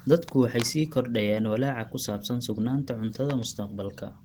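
Opus compression runs through the whole clip, from start to finish. The speech has a muffled, hoarse quality, and that damage is plainly audible. This is likely the encoder working in its hybrid speech mode, where a speech coder handles the low band and a transform coder fills the top. The level of damage fits a low bitrate, around 16 kbps.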